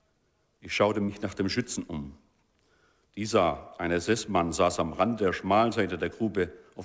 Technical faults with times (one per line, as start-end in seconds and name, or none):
1.04-1.10 short concealed packet loss